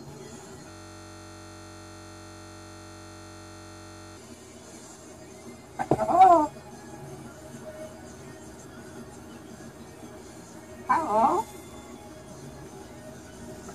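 From 0.71 to 4.17 s there is a system hang loop. The machine stalled while the audio hardware replayed its ring buffer. One 21.33 ms slice repeats about 160 times. It sounds like a steady buzz near 46.9 Hz, which fits a 1024-sample buffer.

From 5.91 to 6.34 s comes hard clipping. The signal ran about 3 dB past what one stage could carry, so its peaks were sheared flat. Those flat tops add high harmonics. Peaks there turn crackly.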